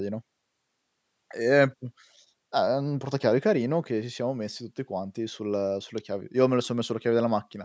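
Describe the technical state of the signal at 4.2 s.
At 4.2 s the speech is intact, with no dropout, distortion or other fault, only the normal call microphone processing whose high-pass filter trims the lowest bass.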